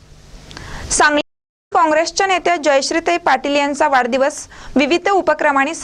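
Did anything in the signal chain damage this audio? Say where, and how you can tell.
Yes, a stream reconnect at the network stage. The audio drops to silence at 1.21 s and stays dead for about half a second, until 1.72 s. When sound returns, it picks up roughly 0.3 s further along than where it stopped, so that stretch of material is simply missing. That jump is what a broken connection looks like: the player lost the stream, reconnected, and started a fresh decoder at the server's current live position rather than where playback left off.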